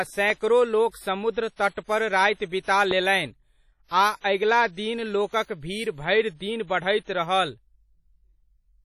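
The whole speech clip carries heavy WMA compression damage: a washy, ringing quality with hiss that swells and fades with the voice, and nothing above 16.5 kHz. That fits a low bitrate around 32 kbps, with quiet detail zeroed and quantisation noise smeared across long transform blocks.

At 0.30 to 0.32 s there's a loud pop, roughly 10 dB above the speech, a sharp single click riding on top while the voice carries on. It's likely a voltage spike from a plug, switch, static or driver glitch getting into the signal.

Then at 0.89 to 0.94 s comes pre-echo, a 44 ms hiss just before an attack that also sounds softened. The codec spread noise meant for the loud onset across the quiet moment ahead of it in the same block.

At 2.49 to 2.52 s it happens again, a 32 ms smear before the onset.

At 2.91 to 2.93 s there's a second loud pop, around 15 dB above the speech. It's a single pulse, likely from the same kind of voltage step.

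At 7.04 to 7.08 s the last pre-echo puts a 35 ms hiss ahead of an attack.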